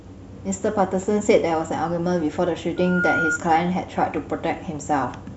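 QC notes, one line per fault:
2.76–3.40 s, loudspeaker feedback squeal: a steady 1.4 kHz tone swells over roughly a third of a second to about 5 dB above the speech, because the microphone is re-amplifying its own loudspeaker output and loop gain at that frequency exceeds unity.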